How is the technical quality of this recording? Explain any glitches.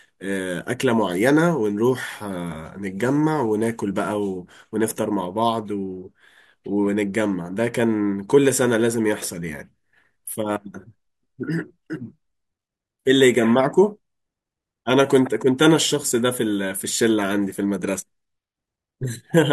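Nothing in this recording stands out as a glitch; it's technically sound with no faults to explain.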